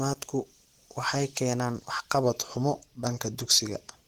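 From the start, the speech has a rough, grainy, hoarse texture that points to likely Opus compression at a low rate, around 16 kbps, in its hybrid speech mode. Bandwidth stays wide, up to about 20.2 kHz, but the coding damage is plainly audible throughout.

From 2.24 s to 3.97 s, everything slows by about 6% and drops roughly 108 cents, just over a semitone, then snaps back. That's likely a drift correction step, where clock-matching software briefly lowered the playback rate to rebalance its buffer.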